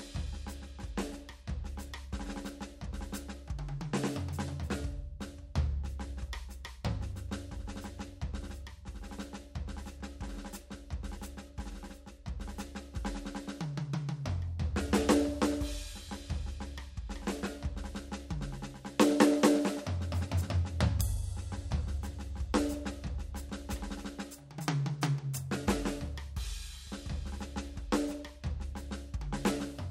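Nothing stood out on listening to this music clip.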